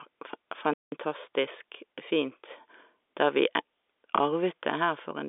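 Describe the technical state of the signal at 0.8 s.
At 0.8 s the speech falls silent in a playback stall from 0.73 to 0.92 s. The player likely starved or blocked for 190 ms, leaving a clean, abrupt gap rather than brief crackle.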